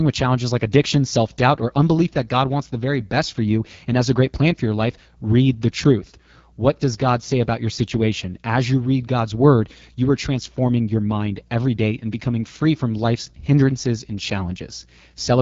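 Throughout the speech, AMR wideband (HD Voice) codec damage is plainly audible: a rough, raspy texture that fits the low 8.85 kbit/s mode. On a spectrogram, energy stops near 7.5 kHz, and the 6.4 to 7 kHz band looks like diffuse noise instead of harmonics.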